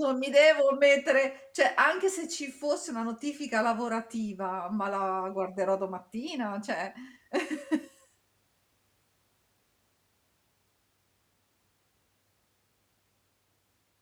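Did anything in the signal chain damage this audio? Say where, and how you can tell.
No, nothing along the chain from capture to playback has left an audible mark on this speech recording.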